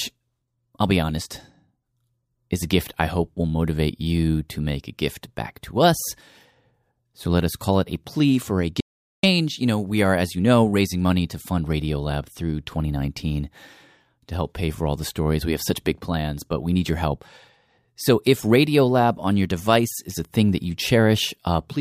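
At 8.81 s, right after "a plea for a", an audio dropout to silence cuts the speech mid-flow until 9.23 s, losing about 430 ms. Unlike a natural pause or a gentle gate, the gap is silent with no room tone, likely from an interrupted input.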